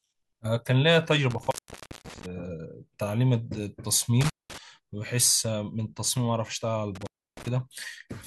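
Intermittent contact breaks the speech at 1.31–2.26 s, 4.21–4.58 s and 6.95–7.48 s. A loose connection opens for about 0.55 s, 0.20 s and 0.31 s, dropping the signal to faint hiss, with crackle as the contact breaks and remakes.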